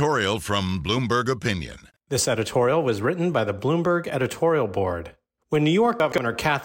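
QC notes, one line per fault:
6.00–6.18 s, chunks out of order: one 60 ms chunk plays two chunks late. The speech jumbles briefly, with three hard joins.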